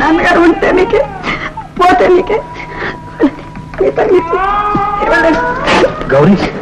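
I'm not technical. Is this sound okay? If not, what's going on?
Yes, nothing in this recording points to a technical fault, so the signal itself is in good shape.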